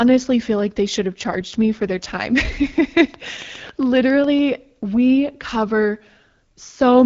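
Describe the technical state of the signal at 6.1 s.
At 6.1 s the signal is intact, with the speech passing through the AMR wideband (HD Voice) codec at 12.65 kbit/s with no fault at that moment.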